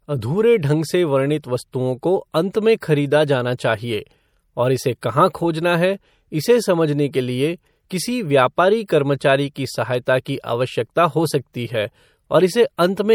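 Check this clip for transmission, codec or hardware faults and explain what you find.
One codec fault runs through the whole speech clip: audible damage of the kind MP3 compression leaves.

From start to finish the sound has a watery, swirling quality, with metallic chirps on s sounds and softened consonant attacks. This is likely MP3 encoding at a tight bit budget, which fits roughly 64 kbps. With too few bits, the encoder drops weak frequency lines, and they flicker on and off between frames. On a spectrogram, the upper bands show ragged, blinking holes and patches, and the content tops out near 21 kHz.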